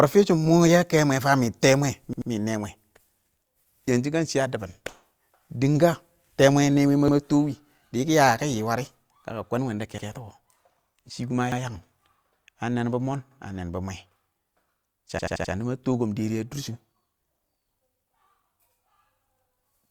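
Repeated buffers stutter the speech four times: 2.13 to 2.30 s, 7.08 to 7.17 s, 11.52 to 11.61 s, and 15.19 to 15.53 s. New audio arrived late, so the last 85 ms block replayed, which fits a 4096-sample buffer. Each repeat joins hard. The first adds two plays, the middle two add one, and the last adds four.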